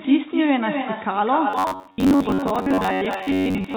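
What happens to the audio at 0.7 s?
At 0.7 s the speech is shadowed by its own echo with no canceller, a fault that runs through the whole clip. The far end's loudspeaker feeds back into its microphone, and nothing strips that pickup out, so each sound returns roughly 300 ms later at about 6 dB below the original, and thinner. Room reverberation would blur into a smooth tail, but this is a distinct, delayed repeat. Above 4 kHz nothing is heard, as expected from the narrowband call codec.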